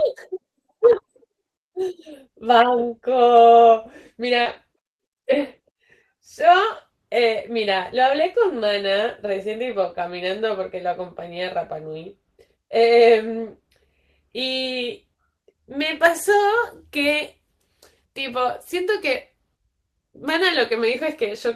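At 4.41 s, about 40 ms of the speech stream is missing, and there is short concealed packet loss through 4.47 s. The receiver had nothing to decode for that span, so it extended the preceding sound to fill the gap and then crossfaded back into real audio. The result is a brief smeared, wobbly patch rather than a clean dropout.

Overlapping the end of that concealment, from 4.45 s to 4.55 s, is a lost packet rebuilt from error correction covering about 60 ms, which fits three separate 20 ms frames. Each lost frame was reconstructed from the low-bitrate redundant copy carried in the next packet, so the audio stays continuous with no gap. Those rebuilt frames sound coarser and noisier than the surrounding speech, giving a short rough-textured stretch just after the smear.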